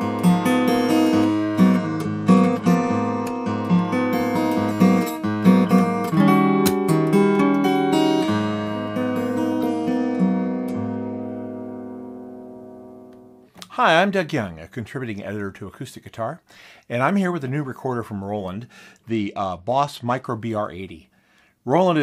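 The audio has three Bluetooth SBC bit pool drops, at 1.77 to 3.79 s, 9.59 to 11.22 s and 19.09 to 20.27 s. Each time, the treble dulls and a gritty, coarse noise rises, then clears. This fits a link under pressure cutting the bit pool from 31 to 13, around 94 kbps, starving the upper sub-bands. A simple low-pass filter would only dull the sound, but here the grit rises along with it and full quality returns once the rate recovers.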